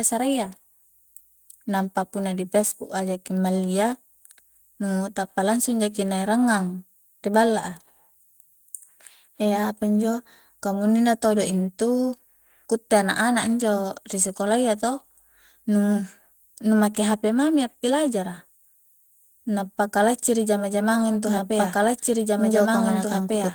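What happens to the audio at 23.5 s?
At 23.5 s the clip is still inside a doubled audio track that starts abruptly at 21.25 s and runs to the end. A second full-band copy, at roughly equal level, trails about two seconds behind, with no decay or room colour. It is likely a second, slower capture path mixed in.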